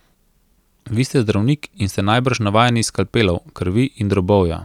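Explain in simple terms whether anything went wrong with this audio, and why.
Nothing went wrong here as far as the ear can tell; the speech runs along steadily the whole way with nothing that trips it up.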